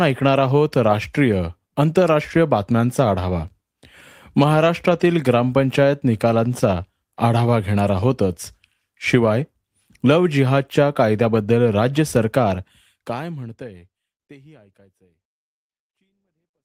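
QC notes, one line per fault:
No faults found in this speech clip; the smooth fade-out from about 12.5 s to the end is an intended editorial fade with no click or hard edge.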